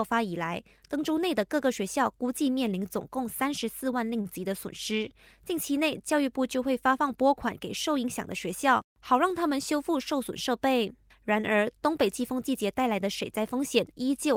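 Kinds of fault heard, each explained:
Short stall from a late packet: at 4.21 s a packet arrived late and the jitter buffer ran dry, so the receiver held the last sound for about 35 ms before resuming from the same point. Nothing is lost, but the held segment drags slightly and adds 35 ms of delay.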